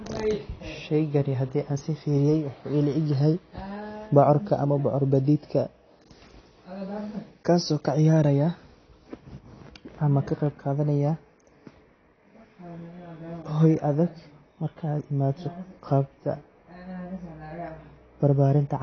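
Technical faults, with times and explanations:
Throughout, AAC compression: nothing in the sound reaches above 6.5 kHz, so the speech comes across dull and muffled, and the coding damage is plainly audible as a smeared, grainy texture. This is likely AAC-LC coding at a low bitrate, which fits about 24 kbps. Starved of bits, the encoder discards the upper band entirely and quantises what remains coarsely. On a spectrogram the energy stops at a flat, hard edge near 6.5 kHz, with empty space above.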